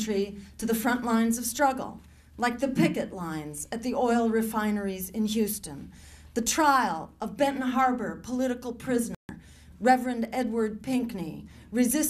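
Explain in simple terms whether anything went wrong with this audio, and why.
Just after 9.1 seconds the sound abruptly goes silent for about 0.15 seconds, then picks up again at 9.30 s. This is a digital broadcast dropout: the receiver stopped getting usable data, muted briefly until good frames returned, and the audio sent during that gap was lost.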